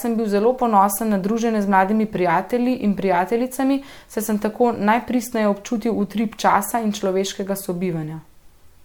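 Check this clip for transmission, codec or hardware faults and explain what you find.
The clip shows generation loss for its full length: swirly, hollow, smeared speech with blurred attacks, likely from about three lossy MP3 passes, consistent with 96 kbit/s, each requantising on a shifted frame grid. A spectrogram shows flickering holes below a 20 kHz ceiling.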